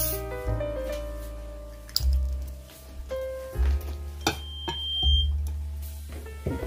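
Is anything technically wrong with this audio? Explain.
Yes. Loudspeaker feedback squeal runs from 4.20 to 5.35 s. A microphone re-picks its own loudspeaker, and near 3.2 kHz the loop gain exceeds one, so that tone swells over about a second to roughly 10 dB above the sound. On a spectrogram it is one bright horizontal line at 3.2 kHz, and the waveform envelope balloons.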